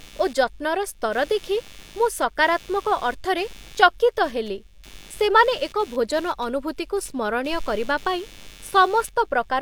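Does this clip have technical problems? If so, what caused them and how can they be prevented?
Yes. Underneath the speech, for the whole clip, there's computer activity noise: a buzzy, chirping texture pulsing at around 100 times a second, sitting roughly 25 dB below the speech. It rises and falls with what the computer is doing, not with the talking, which points to processor, graphics or mouse load currents disturbing the ground the audio circuit shares with the machine. To prevent it, move to an external USB or isolated audio interface, or add a ground-loop isolator, so the recording path no longer shares the computer's noisy ground.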